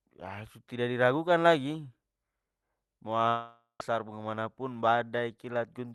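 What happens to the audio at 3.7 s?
Packets likely stopped arriving from 3.28 to 3.93 s, a long network dropout: the receiver stretches the last sound into a fading buzz, then near silence, and half a second is lost.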